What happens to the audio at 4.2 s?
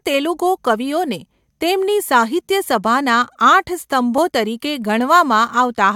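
At 4.18 s there's a tiny skip in the speech where roughly 14 ms of audio just drops out. That's an overlap between stream segments: two adjacent chunks claimed overlapping time stamps, so the player trimmed what it took for a duplicate, except that stretch wasn't actually doubled. The waveform jumps straight across the gap. Its position fits a stream cut into 2-second segments.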